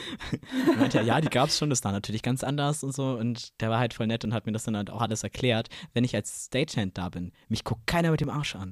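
From 0.26 s to 8.24 s, periodic USB or driver dropouts recur every 2.0 s, about five in all. Each skips a few milliseconds of speech, leaving a tick. Their clockwork spacing, with nothing lost between, separates them from random network dropouts.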